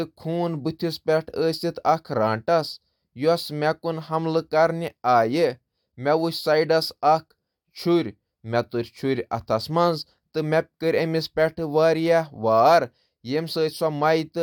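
No technical faults can be heard in this speech recording at any point.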